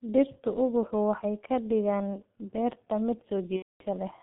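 A speech recording carried throughout by the G.723.1 codec. The sound is confined to roughly 150 Hz to 3.5 kHz and is heavily damaged: muffled and hoarse, with smeared consonants and a sluggish character. This fits a 6.3 kbit/s stream whose 30 ms frames and slow-updating voice model cannot follow rapid changes. Simple band-limiting would leave the voice clear inside the band, so the rough, hoarse texture is what points to this low-rate codec rather than a plain telephone filter. From 3.56 to 3.83 s, right after "ka dhigaan beerta mid", there is VoIP packet loss concealed by the speech codec. About 240 ms of audio is missing, which fits eight lost 30 ms frames. Instead of a hole, the decoder keeps extending its last pitch and filter state, so the sound is stretched out and fades as its gain is lowered frame by frame, and from the third lost frame on it is muted. A plain dropout would simply go silent at once, and this synthetic smear that decays before muting is what marks it as concealment.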